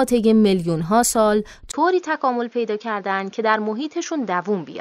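At 1.72 s the speech drops out for 20 ms and returns duller, a few decibels quieter, over a new faint noise floor. The likely cause is an input switched to a poorer device. The spectrogram shows nothing above 6.9 kHz from then on.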